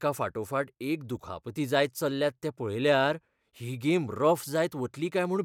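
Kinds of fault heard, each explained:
No faults can be heard anywhere in this recording.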